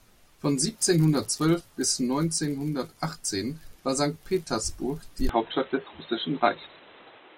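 A speech recording that abruptly turns dull and boxy at 5.29 s and stays that way to the end, with nothing above 4 kHz, no gap at the changeover, a level shift of a few decibels, and a new background noise sitting roughly 30 dB under the voice. The likely cause is an input switched to a poorer device, such as another microphone or a headset's call profile, whose narrower band, own level and own noise take over mid-recording.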